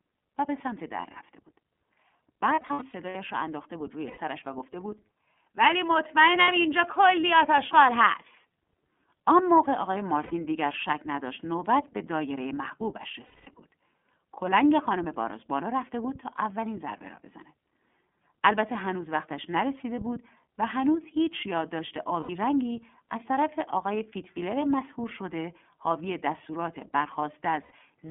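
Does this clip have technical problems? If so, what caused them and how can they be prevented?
Yes. The speech sounds thin, slightly rough and synthetic throughout, with nothing above about 3.4 kHz or below 200 Hz. This is the iLBC codec at about 13.3 kbit/s, which fits its 30 ms frame mode, squeezing the voice into a narrowband phone channel. Prevent it by using a wideband codec such as Opus end to end.

Short held, buzzy vowel-like smears appear at 2.55 s (a patchy burst spread over about 0.6 s, with runs up to roughly 100 ms), 4.07 s, 6.41 s, 10.23 s, 13.26 s (about 210 ms), 22.2 s and 27.63 s (each about 60 to 90 ms). These are lost iLBC frames: the decoder repeats the last pitch cycle mixed with noise, then recovers at once. Reduce packet loss through better network routing, jitter buffering, or forward error correction.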